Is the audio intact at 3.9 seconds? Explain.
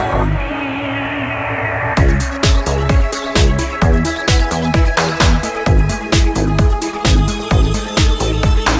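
Yes, the audio at 3.9 seconds is intact, with nothing dropped, clipped or disturbed.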